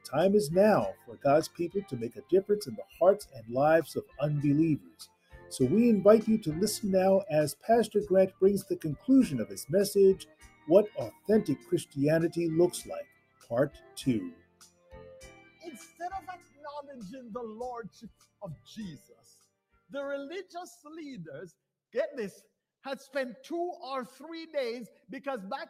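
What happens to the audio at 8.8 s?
Sound cut by the noise suppressor, from 8.3 to 9.54 s: the suppressor judges this stretch to be noise and pulls it down harder than its surroundings. The level dips by up to about 16 dB, and steady or decaying parts sink or have their tails clipped for roughly 0.4 s in total.

This happens because a noise suppressor built for speech is running on the whole sound. It mistakes sustained tones, ambience and reverb for noise, so its gain keeps swinging by around 15 dB. Onsets get through while held portions fade, which makes the audio pump and thin out.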